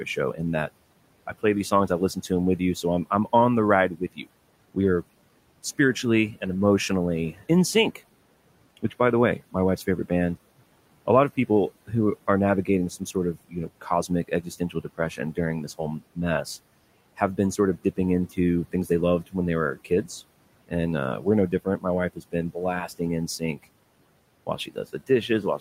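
Speech cut by the noise suppressor appears in this speech recording from 0.05 to 4.76 s, ending just before "are spiritually and emotionally", again from 7.33 to 10.1 s right after that phrase, and from 11.06 s to the end. The suppressor mistakes quieter speech for the room noise sitting about 21 dB below the speech and pulls it down with the background, by up to about 18 dB. Soft consonants and word endings sound swallowed, about a third of a second in total in the first span and a fifth in the second.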